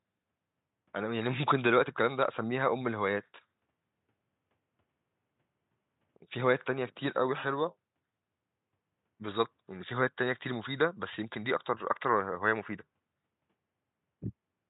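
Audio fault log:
No faults heard in this speech recording.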